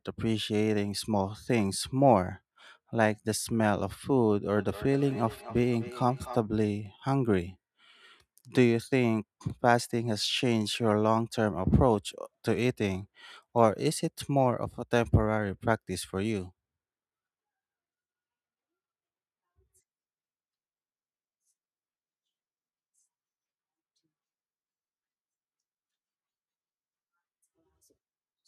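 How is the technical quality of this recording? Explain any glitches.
The recording has one clear glitch, a short stretch of feedback echo between two devices from 4.56 to 6.43 s. Two devices in the same room were on the call, and one replayed what the other's microphone sent, so that microphone captured it again. Each echo canceller removes only its own device's playback, so the loop got through. The speech returns at a steady interval of roughly 0.3 s, peaking about 17 dB below the voice. That fixed, regular delay separates it from room reverberation, which smears sound into a continuous tail rather than distinct returns.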